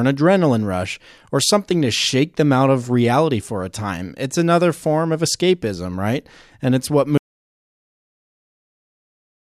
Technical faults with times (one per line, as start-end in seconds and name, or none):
7.17-9.58 audio dropout to silence